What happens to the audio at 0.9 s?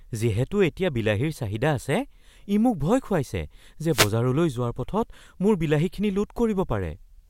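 Nothing goes wrong at 0.9 s; the speech runs through that moment intact, with no dropout, click or distortion.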